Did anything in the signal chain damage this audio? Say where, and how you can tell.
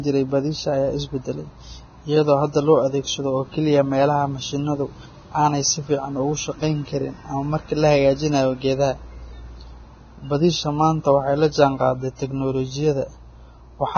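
Yes. Throughout the speech the treble is hissy and grainy, with nothing above 6.5 kHz, roughened vowel tones and smeared consonant attacks. The damage is at the codec stage, most likely Vorbis compression at a very low setting, which fits a bitrate of around 17 kbps. The encoder cut everything above 6.5 kHz and quantised the upper band so coarsely that fine spectral detail turned into noise of similar energy, leaving heavy artefacts across the clip.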